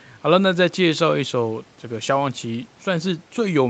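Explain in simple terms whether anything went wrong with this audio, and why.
Nothing went wrong with this speech recording. It has passed through ordinary call microphone processing and a WebRTC call path, which is why nothing above 8 kHz comes through and the top end sounds narrower than a studio recording.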